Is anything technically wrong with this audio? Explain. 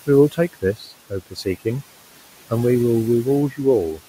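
Yes, there are noise suppressor artifacts throughout. The suppressor pulls the steady room noise down by about 18 dB in the gaps, then lets it back under the speech, so the background pumps. Unlike a gate, it works band by band, leaving a residue rather than clean silence.

There is also speech cut by the noise suppressor, at 0.32–0.92 s (dips of up to about 15 dB), 1.1–1.46 s (about 19 dB) and 3.51–3.6 s (about 13 dB). Here the suppressor mistook quiet parts of the speech for noise, so roughly a third of a second, then a brief stretch, then a tenth of a second of speech sound swallowed. A dropout would leave a hard gap. These dips are partial.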